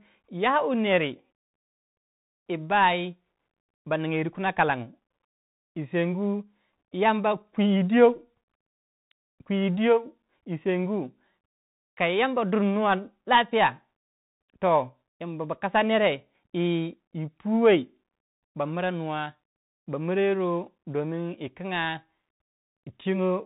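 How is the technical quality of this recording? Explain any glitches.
The recording is degraded throughout by narrowband headset coding. Bluetooth CVSD headset codec, whole clip: a one-bit up-or-down delta coder, consistent with a 64 kbps link, cuts everything above 4 kHz, leaving scratchy sibilants, slope-overload distortion and granular hiss.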